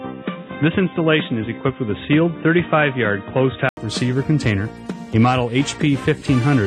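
From the start to 3.77 s the sound is dull and boxy, with nothing above 3.8 kHz and a faint added noise floor well below the signal, then a gap of about 80 ms before it opens up to full brightness at an unchanged level. This is likely an input switched to a poorer device partway through the recording.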